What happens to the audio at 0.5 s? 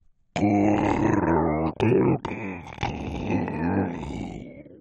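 Nothing goes wrong at 0.5 s; the sound carries on intact through that moment with no dropout, click or other fault.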